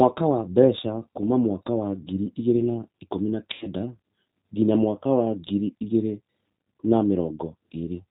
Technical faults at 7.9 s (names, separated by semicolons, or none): G.729 codec